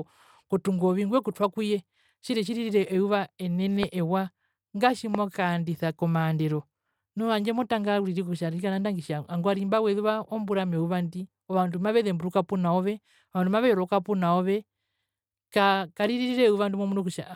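At 3.83–3.85 s and again at 5.15–5.17 s a loud pop, about 15 dB above the speech, likely from an electrical voltage spike. The speech continues underneath, unlike a dropout.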